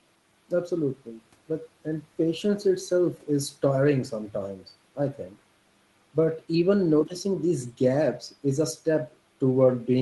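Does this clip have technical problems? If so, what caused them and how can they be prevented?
No, there are no technical problems to report here.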